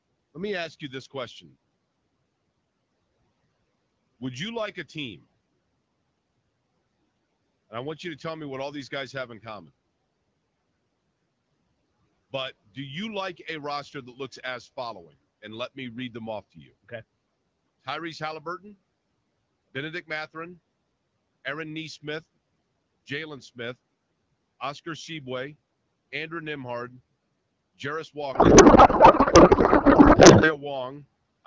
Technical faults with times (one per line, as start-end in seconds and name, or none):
16.53-16.91 speech cut by the noise suppressor
28.33-30.62 codec payload misread